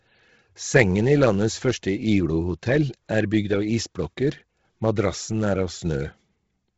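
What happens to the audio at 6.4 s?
At 6.4 s you're hearing the same thing that runs through the whole clip: heavy Bluetooth LC3 compression, most likely. Nothing comes through above 7.8 kHz, and the top of the speech has that breathy, grainy noise-fill. That points to a low bitrate, something like 16 kbps with 10 ms frames.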